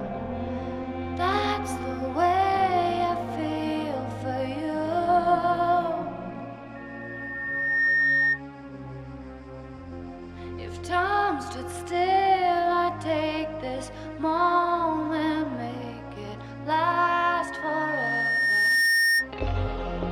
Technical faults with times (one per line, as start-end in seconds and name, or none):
6.75-8.42 loudspeaker feedback squeal
16.92-19.29 loudspeaker feedback squeal